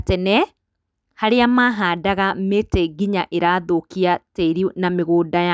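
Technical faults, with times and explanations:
No technical faults can be heard in this speech recording. There is nothing to list with a time or an explanation.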